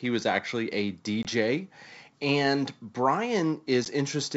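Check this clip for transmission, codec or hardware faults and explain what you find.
Two brief dropouts in the speech. Packet loss on an ADPCM call, at 1.23–1.26 s and 3.85–3.87 s: lost packets become hard-edged silent gaps, and the mistracked predictor and step size bring the speech back slightly distorted.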